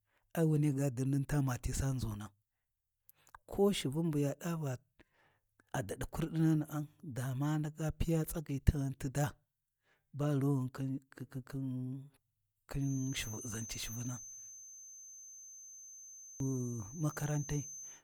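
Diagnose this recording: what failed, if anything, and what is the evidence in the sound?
Bluetooth LC3 compression runs through the whole speech clip, likely at the codec stage. The speech has a plainly audible breathy, grainy edge where the upper spectrum has been replaced with noise fill. The content reaches up to 20.2 kHz, and the damage fits LC3 at around 48 kbps with 10 ms frames.

A feedback whistle starts at 12.74 s and lasts to the end at 18.04 s. It is a thin, steady 6.2 kHz tone about 15 dB below the speech, swelling and fading slowly in level. The likely cause is a loudspeaker-to-microphone loop sitting just at the edge of feedback, so it rings without running away.

A system hang loop runs from 14.67 s to 16.40 s at the driver or buffer stage. A single 46.44 ms slice of audio repeats 37 times, producing a hard mechanical stutter at 21.5 Hz. The driver froze while the hardware kept cycling one ring buffer, which fits a 2048-sample buffer.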